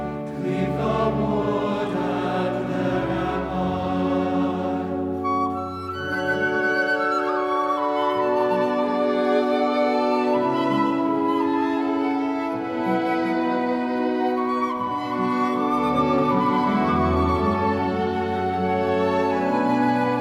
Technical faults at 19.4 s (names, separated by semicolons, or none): doubled audio track